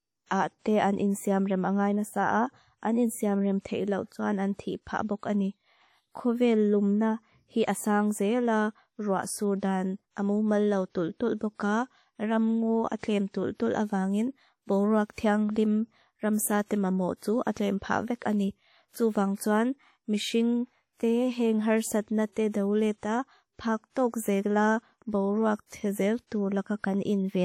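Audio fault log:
Throughout: ringing, washy speech with hiss that breathes with the voice, plainly audible and likely WMA compression at a low bitrate near 48 kbps.
12.99, 16.65, 19.35, 22.32, 22.98 s: pre-echo, 34 to 52 ms of hiss before sharp attacks, as block-spread quantisation noise fills the preceding quiet.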